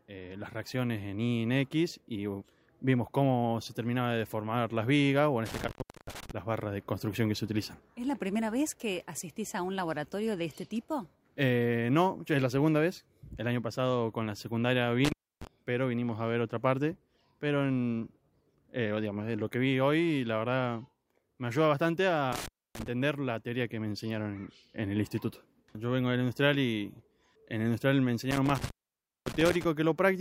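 Intermittent contact cuts the sound out at 5.46, 15.05, 22.32 and 28.31 s. A loose connection opens for about 0.36, 0.29, 0.27 and 0.56 s. Each dropout is edged with crackle.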